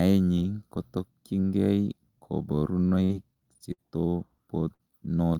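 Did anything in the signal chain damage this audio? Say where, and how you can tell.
Yes, the network dropped packets. From 2.89 to 3.81 s there's repeated packet loss: four gaps, the longest 54 ms, each patched by stretching the last sound, so it turns choppy and robotic.

Then a burst of packet loss at 4.74 to 4.90 s. About 50 ms gets filled with a fading continuation, and roughly 60 ms of speech is simply skipped.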